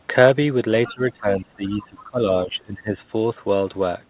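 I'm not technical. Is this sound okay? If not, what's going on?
No. From 0.86 to 0.93 s and again from 1.71 to 2.03 s, a faint second voice slips in underneath. That's the other side's voice leaking through: likely their audio playing from a loudspeaker and getting picked up by the microphone again, only quietly.

Between 0.87 and 2.99 s the main speech keeps sinking, for roughly a second and a half in total. That's speech suppressed in double talk: both sides were likely talking at once, and the echo removal turned everything down, including this speaker.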